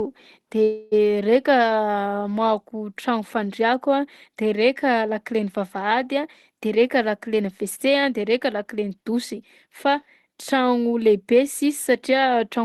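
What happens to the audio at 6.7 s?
From 6.66 s to 9.86 s the speech runs hurried, about 7% faster, yet keeps its normal pitch. This is a jitter buffer speed-up: with too much audio queued, the receiver repeatedly cut short pitch-period pieces, roughly a fifth of a second in all, to catch up.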